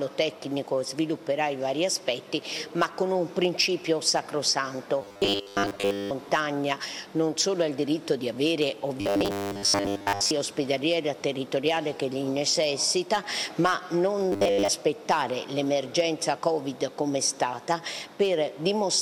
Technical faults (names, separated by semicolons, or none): robotic sound from repeated short buffers